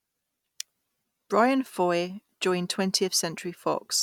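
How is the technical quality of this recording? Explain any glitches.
Nothing stood out on listening to this speech recording, so there are no glitches to explain.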